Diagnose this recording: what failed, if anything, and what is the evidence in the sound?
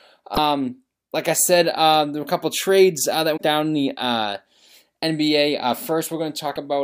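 The failure is damaged data in a compressed stream, at the codec stage: brief glitches in the speech at 0.33–0.38 s, 3.33–3.41 s and 6.52–6.57 s. Corrupt frames there make the decoder misread and resynchronise. A spectrogram shows short disruptions; the waveform shows abrupt discontinuities.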